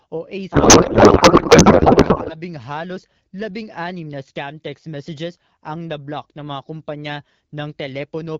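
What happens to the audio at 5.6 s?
At 5.6 s the speech is intact, with no fault present at that moment.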